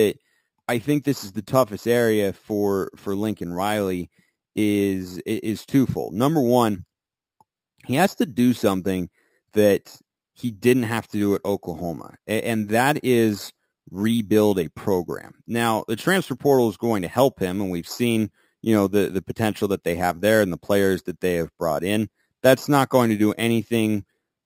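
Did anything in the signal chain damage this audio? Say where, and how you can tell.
Yes. The damage is imaging from sample-and-hold upsampling, at the sample-rate conversion stage, and it runs through the whole clip. The speech carries a bright, metallic fizz whose level tracks the speech. The lowest mirror copy sits between 6 and 12 kHz, about 20 dB below the signal, and it moves opposite to the pitch. The audio was raised from 12 kHz to 48 kHz by repeating each sample with no smoothing filter. So spectral copies remain around multiples of 12 kHz.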